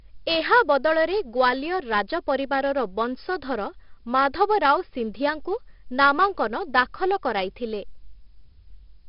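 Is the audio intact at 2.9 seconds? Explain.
No. At 2.9 s, as throughout, the speech carries a gritty hiss that tracks its loudness, roughened onsets, and nothing above 5.3 kHz. This is heavy 4-bit ADPCM compression, coding each sample as a coarse predicted step, consistent with roughly 44 kbps.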